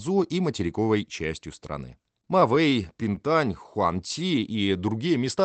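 Between 2.25 and 3.18 s, scattered short gaps appear: about seven packets went missing or arrived late, and the receiver bridged each by extending the preceding sound, around 50 ms in all and none much beyond 15 ms. The speech picks up brief ticks and tiny smeared hiccups.

From 4.19 to 4.66 s comes a jitter buffer slow-down: the receiver, short on reserve, repeated individual pitch cycles to pad the stream by 53 ms. That stretch plays at 91% speed with unchanged pitch, sounding slightly drawn out, over a call-codec top end that stops near 8 kHz.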